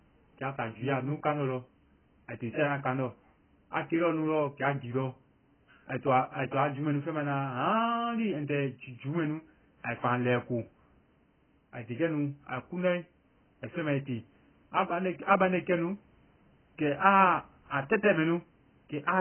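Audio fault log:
throughout, AAC compression: speech cuts off above 3.1 kHz and warbles, smeared, unlike clean low-pass filtering; likely heavy AAC-LC coding at a bitrate near 12 kbps.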